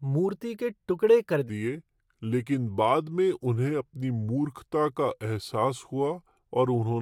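Playback of this speech clip likely switches to the wrong clock rate at 1.49 s, right after "मूर्ति के टुकड़े कर", producing a section at the wrong speed that runs to the end: the audio slows to 0.827 times normal, dropping pitch by roughly three semitones so everything sounds deeper and more drawn out.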